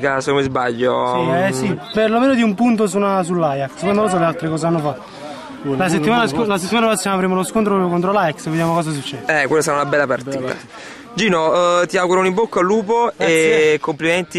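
Hard clipping appears three times: 6.09 to 6.93 s, 9.93 to 10.00 s, and at 11.33 s. Peaks exceed what a stage can pass, by about 1 dB, then about 2 dB. Their tops are cut flat. This adds high harmonics, heard as brief crackle on loud peaks.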